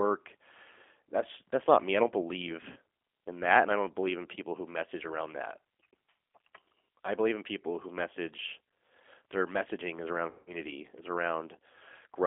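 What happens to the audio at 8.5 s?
At 8.5 s the speech carries G.729 codec damage, present across the whole clip: each 10 ms frame is rebuilt from a vocal tract filter, pitch predictor and sparse pulses, sounding rough and synthetic at what fits an 8 kbit/s rate. A spectrogram shows energy confined to 300 Hz to 3.5 kHz.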